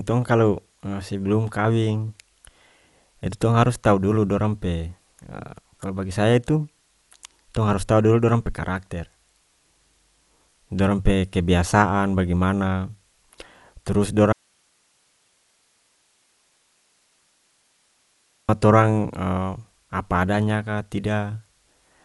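Throughout the speech the band stops at 11.5 kHz and the tonal parts carry a rough, fluttering noise floor with a dull overall colour, plainly audible damage that points to Dolby Digital compression at a low bitrate, likely somewhere near 64 kbps, where many spectral lines lose their bits and get filled with noise.

From 14.33 s to 18.49 s the audio drops out abruptly for about 4.2 s, leaving only hiss roughly 45 dB below the signal before the speech returns mid-flow. This is likely an audio dropout to a faint residue, where the source was lost while the downstream path stayed live.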